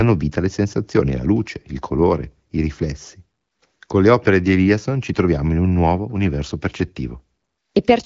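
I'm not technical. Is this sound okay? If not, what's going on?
Yes, the speech shows no technical faults, and it comes through the kind of wideband HD Voice phone coding that keeps speech clear at this quality.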